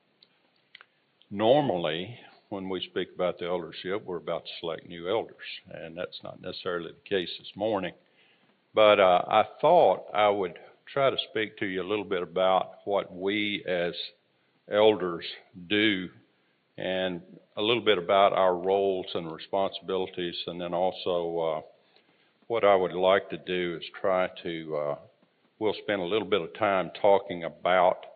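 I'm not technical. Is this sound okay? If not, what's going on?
Yes, no faults to hear.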